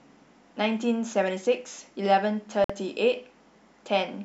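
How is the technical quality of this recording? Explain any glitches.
There is one glitch in the speech. From 2.64 to 2.70 s the audio drops to silence for 52 ms, then resumes, likely a Bluetooth stall. The cut is silence, not a smeared or filled-in gap.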